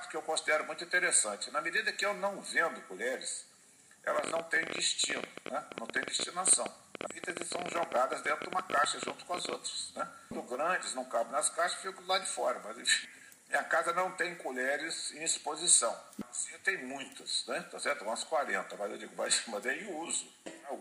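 From 4.19 to 9.54 s, a train of clicks pops over the sound at about 14 per second, unevenly spaced, likely from interfering equipment.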